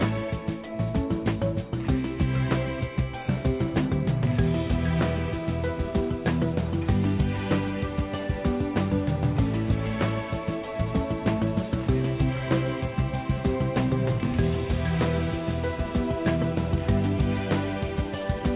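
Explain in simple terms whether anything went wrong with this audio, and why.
Nothing went wrong with this audio; it only has the narrower, phone-like sound of an ordinary call line, which carries nothing above 4 kHz.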